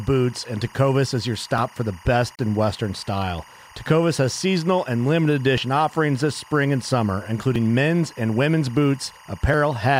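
A steady chirping warble sits behind the speech from start to finish. This is timecode bleed. Linear timecode from a nearby track or cable has leaked into the audio. The code switches between two pitches, near 1 kHz and 2 kHz. It runs at 24 frames per second. That gives the chirp its rapid, regular rhythm. It sits well below the speech, but it never stops.

At 1.58 s, between "is your" and "for the best in", the speech skips forward. A tiny slice of sound is gone. The two sides butt together with no silence between them. This is audio missing between chunks. The likely cause is a recorder working in blocks of about 2 seconds that drops a sliver at each handover.

From 2.35 s to 2.39 s, right after "for the best", the sound drops out for about 35 ms. This is a gap at a join of encoded pieces. Two separately encoded pieces were joined untrimmed. Encoder start-up delay and end padding stayed in as silence. 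The edges are smeared. Then the speech resumes exactly where it stopped.

More chunk skips follow at 5.58 s and 9.54 s. Another falls at 7.56 s, between "this spring and summer" and "men's and women's". Each is a brief jump with nothing missing that you hear as silence. The spacing matches a block boundary roughly every 2 seconds.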